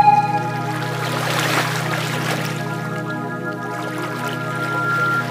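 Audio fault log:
4.01–5.27 s, loudspeaker feedback squeal: a single tone near 1.4 kHz swells over roughly a second until it sits about 5 dB above the sound, because the microphone is re-amplifying its own loudspeaker. That self-building rise separates it from a steady interfering whistle.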